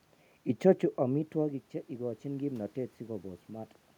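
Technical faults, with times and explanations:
0.62–3.78 s, automatic gain rising: the talker moves away around half a second in, dropping the level by about 13 dB, and the gain control then climbs about 5 dB over three seconds. Room noise swells with the voice, so this is gain, not the talker returning.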